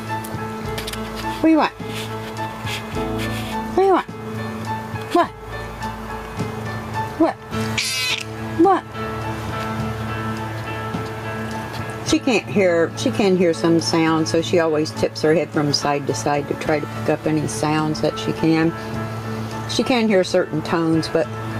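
The audio shows gain pumping from start to finish. The level keeps swinging, by around 10 dB, as it ducks under loud sounds and rises again after them. Loud and soft parts sit closer together. The likely cause is input gain set far too high, with a fast limiter or compressor pulling it down.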